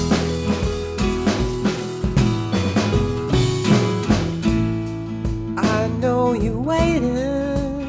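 Nothing stood out as technically wrong on listening to this audio.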